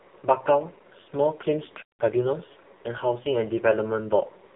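Channel delay (comb filtering) runs through the whole clip. One channel lags the other by roughly 2 ms, and summing them to mono cancels the shared content at evenly spaced frequencies, starting near 300 Hz. The speech sounds hollow and phasey, with fixed notches.

AMR narrowband mobile codec damage is also present throughout, and it is heavy. Nothing passes above 3.8 kHz, and the line band sits between 150 Hz and 3.5 kHz. The buzzy, synthetic quality of the voice points to one of AMR-NB's lowest bitrate modes, near 5 kbps, where very few pulses drive the vocal-tract model.

Time-compressed catch-up runs from 2.00 to 2.34 s. After a stall, the player clears its backlog by cutting out small pieces and cross-fading across the gaps. The speech plays at 1.5× speed at normal pitch, sounding hurried.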